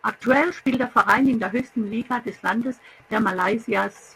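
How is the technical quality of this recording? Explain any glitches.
The technical quality of this recording holds up, with no glitches to explain.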